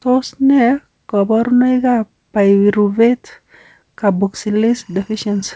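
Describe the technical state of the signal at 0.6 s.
At 0.6 s the speech is intact, with no dropout, glitch or distortion, and it carries only the band-limiting of the G.722 call path, with nothing above 8 kHz.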